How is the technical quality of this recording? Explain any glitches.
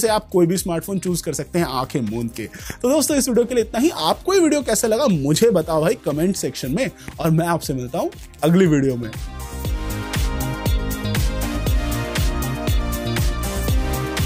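No audible faults or glitches.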